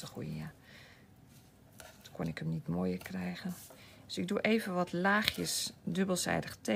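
No technical faults can be heard anywhere in the clip. Nothing in the sound points to a problem in how it was captured, processed or delivered.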